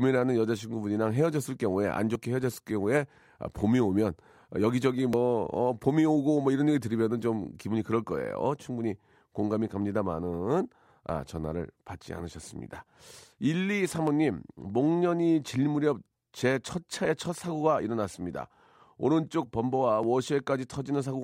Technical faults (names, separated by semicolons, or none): audio missing between chunks